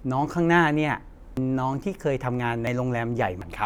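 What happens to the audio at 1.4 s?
At 1.37 s the audio jumps forward: compressed frames were skipped, so roughly 400 ms of speech never plays. The jump length fits about four frames of roughly 93 ms each, dropped from the stream or rejected by the decoder as damaged. A spectrogram shows an abrupt discontinuity in the harmonic pattern.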